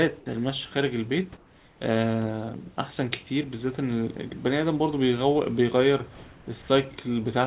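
A speech clip that's gone through a call path with nothing above 4 kHz, which fits a narrowband G.711-style codec. Between 1.37 and 1.79 s, the real room background drops out and a flat, featureless hiss about 2 dB quieter takes its place. That's likely comfort noise in place of the background, with the sender pausing transmission and the receiver filling the gap.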